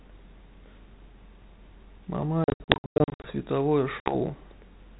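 Speech over a G.726 ADPCM link at 32 kbit/s, with audio stopping above 4 kHz, suffers packet loss on an ADPCM call twice. From 2.44 to 3.28 s, about 500 ms of audio drops out in silent, hard-edged gaps spread across that span, the longest about 100 ms. From 4.0 to 4.14 s, about 60 ms of audio is lost. Each time the decoder's adaptive predictor and step size lose track of the sender's, so speech resumes with brief, slight distortion that settles within tens of milliseconds.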